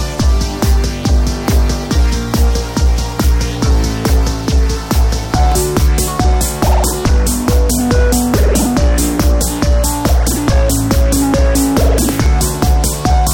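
From 4.69 to 6.07 s, and again from 10.61 to 12.54 s, CD scratch ticks cut through the everyday sound: six, then eight, short clicks at about four a second, each only a few milliseconds long. A blemish on the disc corrupts more data than error correction can recover on every rotation, so the player patches or mutes those samples. On a spectrogram each tick is a thin vertical broadband line at evenly spaced intervals. The waveform shows brief spikes or tiny flattened gaps.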